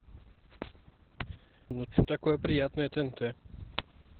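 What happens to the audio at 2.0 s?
At 2.0 s the audio is inside a stretch where chunks play out of order. From 1.71 to 2.05 s, a 171 ms block was delivered one chunk late and plays after the block meant to follow it, so the speech jumbles briefly.

The whole clip, including this moment, also carries heavy Opus voice compression. The narrowband SILK coder leaves nothing above about 4.3 kHz and quantises the excitation coarsely, which fits a rate around 8 kbps. The speech sounds muffled, hoarse and faintly robotic.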